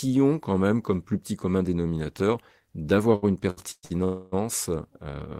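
From 3.15 to 3.92 s the speech develops repeated stalls (stutter): four short gaps, the longest 119 ms, where the last sound is stretched out to cover late packets. About 300 ms is filled this way, roughly 40 percent of that stretch, so it drags and hiccups rather than dropping anything.

Then at 4.04 s comes a single call audio freeze lasting until 4.34 s, a held, fading continuation of the last sound for about 280 ms that never reaches silence. Unlike the stutter it is one unbroken hold, likely from packets delayed in transit, after which speech resumes where it stopped, now running that much later.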